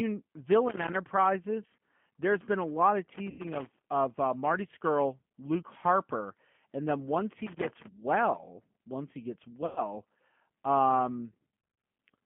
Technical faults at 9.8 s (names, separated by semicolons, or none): G.729 codec; VoIP packet loss concealed by the speech codec